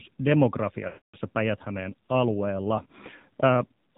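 A speech clip carried over the AMR narrowband mobile codec, at a low bitrate that sounds consistent with the 7.4 kbps mode. The codec samples at 8 kHz and rebuilds the voice from a vocal tract model excited by sparse pulses, so nothing above 4 kHz survives. At this rate the damage is plainly audible: the voice has a buzzy, synthetic edge, and the missing upper band leaves it muffled and phone-like throughout.

From 0.88 to 1.16 s, a stretch of about 260 ms, lost AMR speech frames interrupt the audio, consistent with a run of roughly 13 failed frames. The decoder keeps replaying the last good pitch and vocal tract settings at falling gain. The sound smears into a drawn-out tone that fades to silence within 0.1 to 0.2 seconds. The voice then returns briefly weak or rough just before "päijät alueella".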